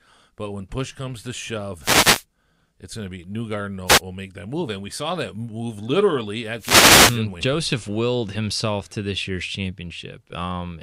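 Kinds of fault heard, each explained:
Wireless microphone noise hit: the FM radio link fades as reflected paths cancel, so receiver hiss surges over the speech in bursts at 1.80–2.24, 3.86–4.01 and 6.58–7.21 s, showing as broadband vertical smears on a spectrogram and fuzzy, raised-floor patches in the waveform.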